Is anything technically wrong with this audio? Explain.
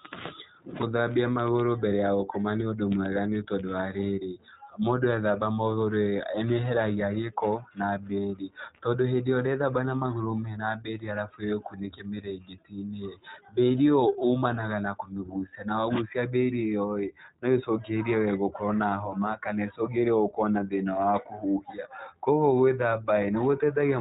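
Yes. Throughout the speech, the audio has passed through the iLBC codec, a narrowband VoIP coder that rebuilds the excitation of each 20 ms frame on its own, without drawing on the previous frame, at a data rate that fits its 15.2 kbps mode. Nothing above 4 kHz survives, so the speech sounds muffled and lacks sibilant crispness. The frame-by-frame coding leaves a plainly audible rough, slightly synthetic texture.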